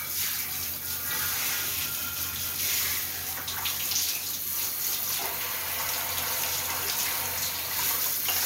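From 4.25 s to the end, a thin feedback whistle near 4.3 kHz sits about 20 dB under the sound, likely from a loudspeaker-to-microphone loop held just short of instability. Unlike a runaway howl, it never builds up, only swelling and fading slowly in level.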